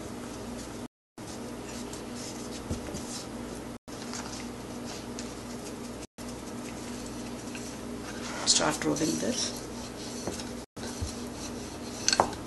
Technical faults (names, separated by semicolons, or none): Bluetooth stall